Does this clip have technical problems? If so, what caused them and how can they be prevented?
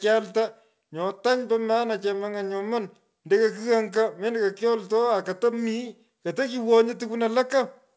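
No, there are no technical problems in this speech recording. It was carried over a call connection, and the sound stops at 8 kHz, which fits a wideband call codec such as G.722.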